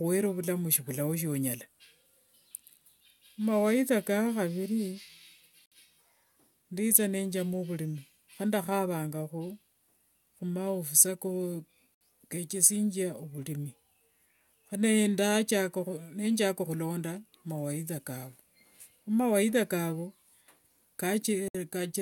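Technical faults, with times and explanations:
5.66 s, 11.95 s and 21.48 s: gap at a join of encoded pieces. Speech halts for 59, 64 and 64 ms at separately encoded joins, where the leftover encoder delay and last-frame padding add silence. Unlike a dropout, no sound is lost, and it resumes exactly where it stopped.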